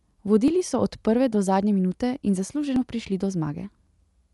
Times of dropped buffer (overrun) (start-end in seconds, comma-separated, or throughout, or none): 0.48, 1.92, 2.76